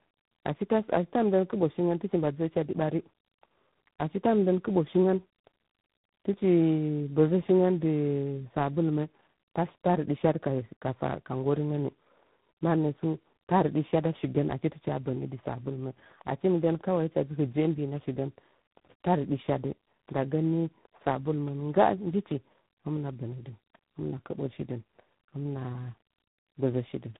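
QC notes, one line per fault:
throughout: tandem speech coding. The speech passes through two speech coders in a row, and the second works on the already damaged output of the first, so the faults stack. The result is rougher and more warbly than one codec alone, with a muffled top that stops near 3.9 kHz. It points to an AMR-NB stage at about 6.7 kbit/s feeding G.726 at about 24 kbit/s. A plain low-pass filter would only muffle, not add this roughness.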